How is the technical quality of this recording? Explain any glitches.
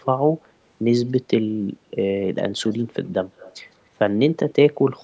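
The recording has one recurring problem, an echo leak, heard twice: from 2.67 to 3.09 s and from 3.37 to 3.56 s. In both spots a faint, delayed copy of the speech trails the original by about 153 ms, sitting roughly 25 dB below it. The likely cause is a far end playing the call over a loudspeaker, where the echo canceller failed to fully subtract what its microphone picked up and sent that residue back down the line. The audio's band limit at 8 kHz comes from normal call microphone processing.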